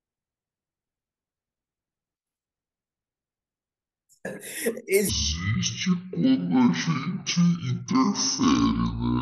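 Speech, with a section at the wrong speed from 5.09 s to the end: it plays at 0.529× speed, about ten semitones lower, likely from clock mismatch. A spectrogram shows harmonics squeezed downward; the waveform looks stretched.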